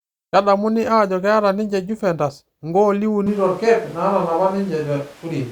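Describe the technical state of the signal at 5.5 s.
A switch to a distant microphone runs from 3.27 s to the end: the speech turns suddenly roomy, hollow and thin, likely because the close microphone dropped out, with background noise about 25 dB below.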